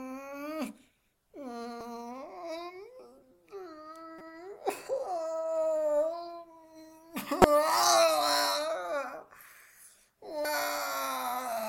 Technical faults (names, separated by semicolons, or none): damaged data in a compressed stream